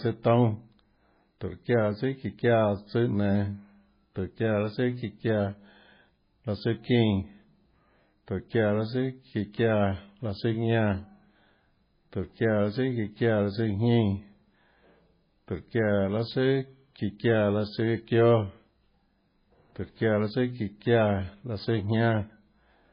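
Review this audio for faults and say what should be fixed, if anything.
The whole clip has heavy damage consistent with MP3 compression, the likely cause being a very low bitrate encode, and the sound fits something around 16 kbps. There's nothing above about 5.1 kHz, so the speech sounds dull and the s sounds lose their edge. The encoder is starved of bits, so weak frequency lines drop in and out frame to frame, giving that watery, swirly texture and smeared consonant attacks. To prevent it, keep a lossless or high-bitrate master and only encode at a decent bitrate.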